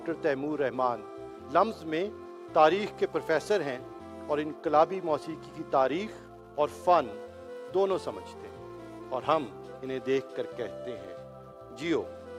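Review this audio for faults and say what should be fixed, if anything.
Nothing to fix: no audible faults anywhere in the clip.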